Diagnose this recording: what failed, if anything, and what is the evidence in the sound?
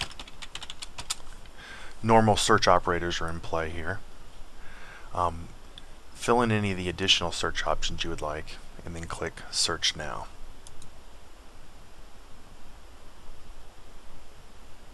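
Nothing in the chain from capture to playback has failed, and the audio carries no audible disturbance that would point to a problem at any stage.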